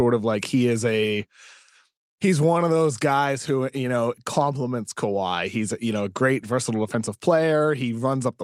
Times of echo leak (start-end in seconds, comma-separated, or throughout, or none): none